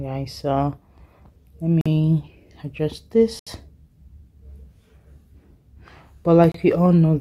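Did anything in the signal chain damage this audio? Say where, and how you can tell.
Yes. The damage points to the wireless playback link, likely a Bluetooth stall. The sound drops to dead silence three times: 1.81 to 1.86 s for 45 ms, 3.39 to 3.47 s for 73 ms, and 6.52 to 6.55 s for 27 ms. Each gap is a clean cut with no fade. The sound then resumes. Radio interference delays packets, the receiver's buffer empties, and output halts until resent data arrives.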